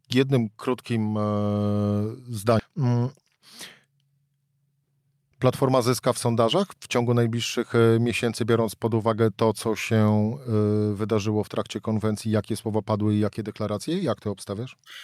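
A skip ahead at 2.59 to 2.61 s cuts out roughly 0.7 s of speech. The audio jumps straight forward with no fill, and the two sides meet almost directly, as a stretch was dropped while later audio was already queued.

Jitter buffer speed-up follows at 2.69 to 3.37 s, running at 111%, and again at 3.84 to 4.21 s at 113%. Repeated trimming of short pieces of one or a few pitch periods removes roughly 70 ms, then 50 ms, so the speech sounds hurried at an unchanged pitch.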